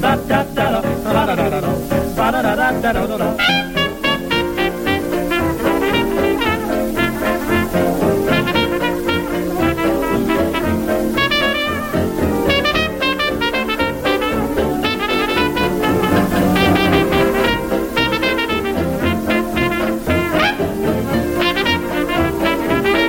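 From 15.13 s to 17.47 s a doubled audio track appears: a second full-band copy of the sound runs roughly a fifth of a second behind, at about the same level, with no decay or room colour. It likely comes from a second, slower capture path, and both its start and its stop are abrupt.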